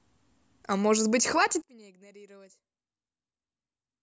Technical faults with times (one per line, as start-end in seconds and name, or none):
1.62-4.02 one channel inverted